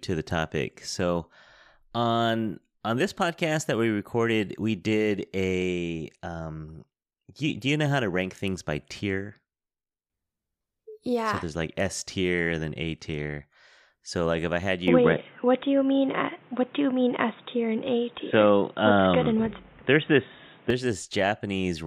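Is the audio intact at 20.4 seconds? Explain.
No. From 14.88 to 20.70 s, just after "like if I had", the speech turns dull and boxy, with nothing above 3.8 kHz, a roughly 5 dB level shift and new background noise. This likely comes from the input switched to a poorer device with a narrower band.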